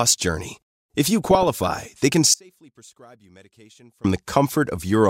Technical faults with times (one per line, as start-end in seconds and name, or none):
1.21-1.98 DAB burbling
2.34-4.04 audio dropout to a faint residue